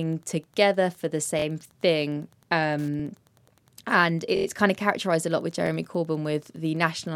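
Throughout the speech there is Wi-Fi interference: a nearby radio's transmissions are picked up and rectified by the audio circuitry, leaving a steady tick at a 102.4 ms beacon period, close to ten ticks per second. It sits low, roughly 40 dB under the speech, so it is most noticeable in pauses as a faint, regular clicking beneath the voice.

Repeated buffers occur four times, where fresh audio arrived late and the device replayed its last block of about 23 ms, which fits a 1024-sample buffer. Nothing is lost; the same fragment simply repeats with hard joins. At 1.39 to 1.44 s, after "together for the", it plays three times. At 3.00 to 3.02 s it doubles. At 4.37 to 4.46 s, just before "kind of characterized a", it sounds five times, a buzzing stutter. At 5.67 to 5.69 s, after "characterized a lot with", it doubles again, heard as a brief click.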